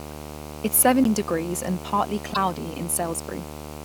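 A screen or video cable is coupling into the audio path, producing video or display buzz across the whole speech clip: a 75 Hz buzz at the picture's field rate, sitting roughly 15 dB below the speech, with a layer of harsh hash riding above it.

At 1.04 s a CD skip occurs. The laser jumped to a different turn of the disc's spiral, so playback mutes very briefly, for about 10 ms, and resumes elsewhere. The result is a small tick followed by an abrupt jump in the speech.

From 2.30 to 2.37 s, a corrupt frame was decoded. Flipped bits in the compressed stream led the decoder to apply wrong gains or misread codes, placing energy at the wrong frequencies. The span points to a few damaged frames, heard as a short chirping burst of noise.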